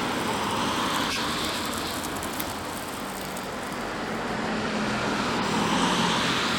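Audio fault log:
1.09–1.17 s and 5.37–5.46 s, compressed frames skipped: in both places the sound jumps ahead by roughly 50 ms, as if whole frames just went missing. The decoder either never got those frames or threw them out as damaged, so playback carries on from the next good one.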